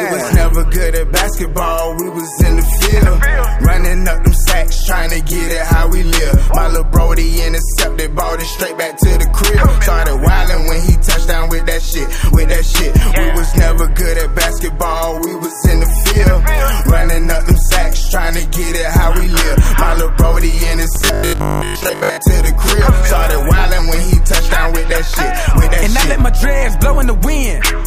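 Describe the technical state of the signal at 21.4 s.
At 21.4 s the signal has robotic sound from repeated short buffers, running from 20.96 to 22.18 s. The sound collapses into a rigid, metallic 50 Hz buzz, which fits a 20 ms block being replayed over and over, likely because fresh audio arrived too slowly and most of the real material in that span was skipped. Unlike mains hum at the same pitch, this buzz only roughly follows the sound's own loudness and stops with the fault.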